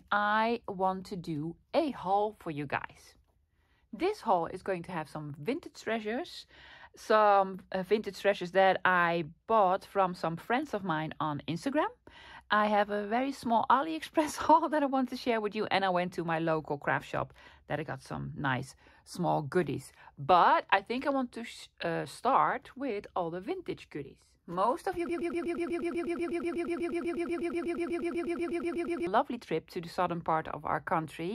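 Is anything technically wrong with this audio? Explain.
Yes. From 25.09 s to 29.07 s there is a broken-record loop. A fragment of about 122 ms repeats identically and back to back, roughly 33 times over those four seconds, giving a rapid stutter instead of continuing sound. The likely cause is a stall in the player, encoder or stream, which kept re-sending the last fragment it held. The audio that should have played during that span is missing.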